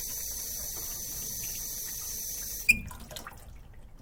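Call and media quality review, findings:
Adaptive stream starting at a low bitrate, 0.0–2.52 s: dull sound with stronger artefacts, then sudden clean step-up with no gap, unlike a dropout. Fits roughly 32 to 64 kbit/s Opus switch.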